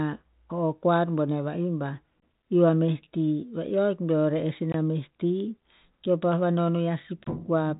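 At 2.2 s, between "koar boneh va'ih bah" and "iu a meh ti", then at 4.72 and 7.24 s, there's a gap between chunks: hard-edged 21 ms holes every 2.5 s, where silence got inserted at the joins. The audio is band-limited below 3.8 kHz, consistent with 32 kbit/s G.726 ADPCM.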